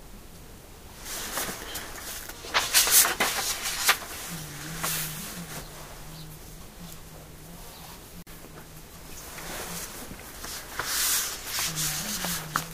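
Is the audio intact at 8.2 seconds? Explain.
No. A gap at a join of encoded pieces opens from 8.22 to 8.27 s, a gap of 44 ms cut into otherwise continuous sound. The audio was encoded in separate pieces and joined without trimming, so the encoder's start-up delay and the padding on the last frame of the earlier piece both remain as dead air. The dropout has edges smeared by the codec, and the sound resumes where it stopped.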